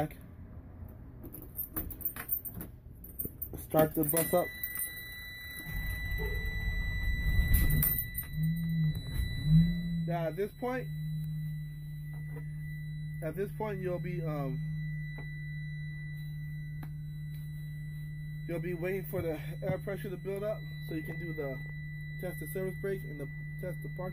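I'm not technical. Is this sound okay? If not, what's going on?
No. From about 9.62 to 10.19 seconds there is zipper noise. The volume drops a lot there, but not in one smooth glide. It goes down in lots of tiny jumps, around a hundred every second. Each jump makes a faint click. Together the clicks sound like a quick ticking or zipping sitting on top of the sound while it gets quieter.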